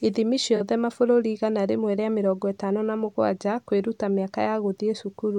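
At about 0.56 s a brief smeared, noisy and phasey patch interrupts the speech, lasting roughly 43 ms up to 0.60 s, just before "mabũrũri igana rĩmwe rĩa". This is AAC frame loss with concealment: the decoder lost a stretch of coded audio, a gap that fits two frames, and bridged it by reusing the last intact spectrum with altered phase, so the hole is covered by a blurred stand-in rather than silence.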